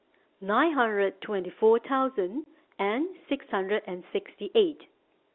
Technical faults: packet loss filled with silence

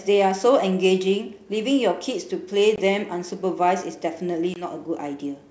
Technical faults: packet loss on an ADPCM call

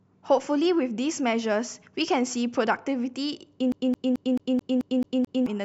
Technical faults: CD stuck on one turn

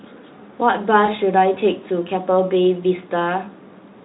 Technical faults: VoIP packet loss concealed by the speech codec

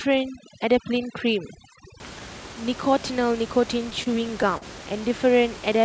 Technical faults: overdone noise removal; repeated stalls (stutter)

